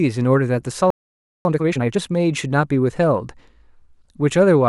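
At 0.90 s the speech cuts out into silence for about 0.55 s, until 1.45 s. This is a playback stall, likely the player running short of data or its thread being blocked. Unlike a dropout that skips material, it stops mid-flow.

From 1.45 to 1.99 s comes time-compressed catch-up: the player clears its backlog by cutting out short pieces and cross-fading the joins, running at twice normal speed. Pitch stays unchanged, which sets it apart from a sped-up resample.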